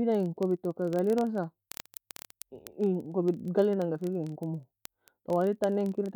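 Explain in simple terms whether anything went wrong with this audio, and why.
Yes, something went wrong: word clock ticks. A digital link fed a device running on its own unsynchronised clock, drifting by several hundred parts per million. Every 30 ms or so, one sample slipped, causing sharp, uneven ticks throughout the speech, from 0.12 to 6.14 s.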